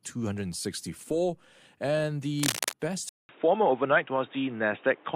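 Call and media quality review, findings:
Cable scratch noise, 2.40 to 2.73 s. Dense, uneven crackling bursts over the speech, about as loud as the speech itself. Likely a worn cable or connector being moved, with contact resistance fluctuating rapidly and modulating the signal path.

Input switched to a poorer device, 3.09 s to end. 0.2 s dropout, then dull, boxy speech with nothing above 3.8 kHz, a few dB level shift, and new background noise roughly 30 dB down. Likely a mid-call switch to a narrowband headset microphone.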